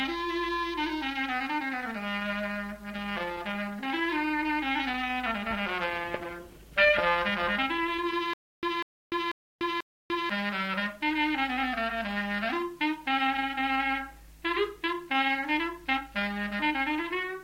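From 8.33 s to 10.30 s the audio falls into a stutter with silent gaps: the same 195 ms fragment plays four times, each followed by about 295 ms of dead silence, repeating every 490 ms. The likely cause is a stalled player or stream replaying its last buffered fragment at each retry, so the audio from that stretch is lost.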